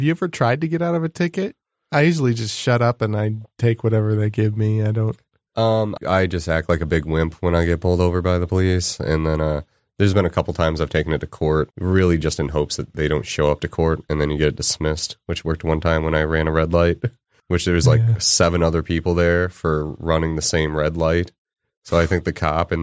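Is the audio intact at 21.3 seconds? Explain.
Yes, at 21.3 seconds the audio is intact, with no dropout, click, distortion or other fault audible at that moment.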